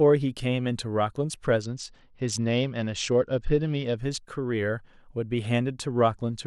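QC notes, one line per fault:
1.62 to 3.97 s, Bluetooth SBC bit pool drop. The treble falls away and the speech turns dull and muffled. A gritty, granular noise rides under it. The sound points to the link lowering the SBC bit pool from 31 to about 10, which fits a rate near 77 kbps. With so few bits, the top sub-bands get almost nothing and the lower ones are coarsely quantised. Clarity returns at 3.97 s as the rate recovers.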